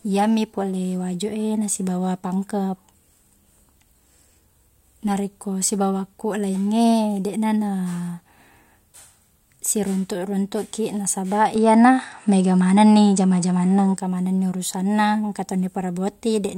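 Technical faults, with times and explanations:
11.56–13.97 s, input switched to a poorer device: sound abruptly dulls with nothing above 9.9 kHz, level shifts roughly 5 dB, faint new noise floor, no gap; likely a narrower-band microphone, switching just before "manengni urusanna engka to".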